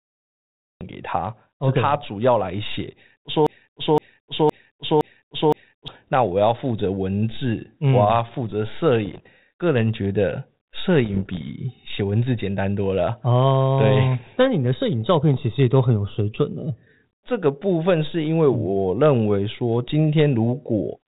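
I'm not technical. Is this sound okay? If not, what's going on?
No, there are a few problems.

Cut-off start: the recording began a moment too late. The first 0.81 seconds is dead silence, and then the speech switches on abruptly in the middle of a sound, with no natural beginning. So the first part of what was said is simply missing, as if someone pressed record just after the speaker started talking.

Broken-record loop: the playback or stream likely froze and kept resending the last short piece it had. From 3.47 to 5.88 seconds, a snippet about half a second long plays over and over, five times in a row, like a skipping record. Whatever should have been heard during those two and a half seconds is lost.

Bit errors on an ADPCM link: this is the kind of compact digital format cordless phones use, and some of the data got garbled on the way. Each corrupted bit throws the decoder off for a few moments. 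You hear this as pops and brief rough, crackly bursts with the volume jumping, at 9.05 to 9.28 seconds and again at 11.05 to 11.43 seconds.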